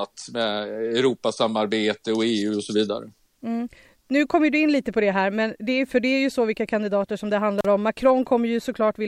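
A speech recording with one brief dropout: at 7.59 s the sound cuts out for about 38 ms, bracketed by crackle, with faint hiss filling the gap until it returns by 7.66 s. That is an intermittent contact, a loose cable or plug momentarily opening the signal path.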